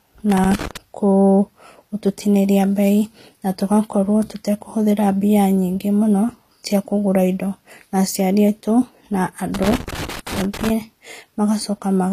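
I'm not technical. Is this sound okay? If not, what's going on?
No. The speech sounds dull throughout, with nothing above 14.9 kHz. This is likely low-bitrate audio saved at a high bitrate. A small, heavily squeezed file was later stored as a large MP3, which cannot bring back the lost detail.

There is also loose connector crackle, from 0.30 to 0.77 s and again from 9.54 to 10.70 s. A worn or dirty plug loses and regains contact as it moves. That chops the sound into bursts of scratchy crackling.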